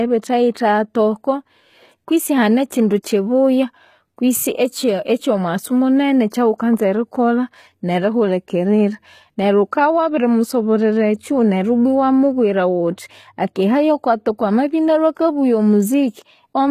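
From the start and throughout, the treble of this speech sounds synthetic: s sounds are gritty and lispy, and nothing reaches above 15 kHz. The likely cause is HE-AAC compression at a very low bitrate, around 20 kbps, where the upper band is rebuilt from copied lower harmonics. On a spectrogram, the top band looks like a blocky, smeared replica of the band below.

At 0.54 s and again at 3.03 s, pre-echo puts a short hiss just ahead of a sharp attack, spread over about 12 ms and then 16 ms. The codec's quantisation noise for the loud block leaks into the quiet moment before it. The waveform shows a low noise smear before each onset.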